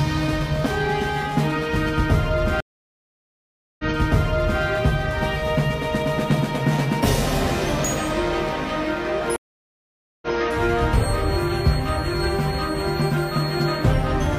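At 2.60 s the audio stops dead and a stream reconnect follows. The connection broke and the player sat silent for 1.19 s before starting a fresh decoder, with sound fading back in and settling by 4.63 s. The same fault returns at 9.36 s, with 0.86 s of silence and recovery by 10.37 s. Unlike a plain dropout, playback resumes earlier than where it broke off, 0.84 s back the first time and 0.14 s the second, so short stretches repeat where the server resent a burst.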